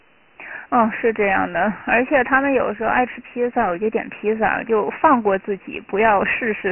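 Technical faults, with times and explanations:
Throughout, Dialogic VOX ADPCM: coarse 4-bit steps leave gritty hiss tracking the speech, nothing above 3 kHz; spectrogram shows a hard ceiling, grainy floor.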